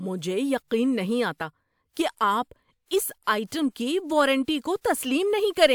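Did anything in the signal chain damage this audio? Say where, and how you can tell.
No, nothing in the signal chain damaged this audio, and there's no stage to point to.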